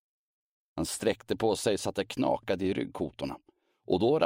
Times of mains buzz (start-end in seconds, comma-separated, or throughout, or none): none